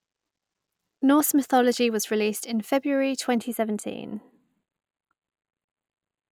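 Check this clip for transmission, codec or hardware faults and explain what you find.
One fault appears in this speech clip. From 3.38 s to the end, channel delay (comb filtering) sets in. One channel runs a tiny fraction of a millisecond late, a few samples, before the mix to mono, so shared content cancels at evenly spaced frequencies starting near 5 kHz. The speech turns hollow and phasey. Unlike a simple low-pass cut, the top end returns between repeating notches.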